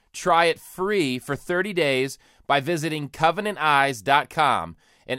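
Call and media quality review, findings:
No faults detected in playback.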